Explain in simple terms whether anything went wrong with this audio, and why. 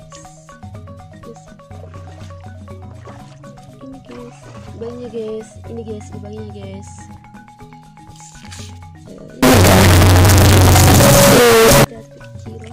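Something likely went wrong in how the computer read the stored numbers for a short stretch, from about 9.43 to 11.84 s: a signed and unsigned mix-up, which fits 16-bit samples. The numbers are meant to swing above and below zero, but the system misread which were which, so every small crossing through silence turned into a leap from one extreme to the other. You hear it as a burst of very loud, harsh distortion, and even quiet moments become just as loud.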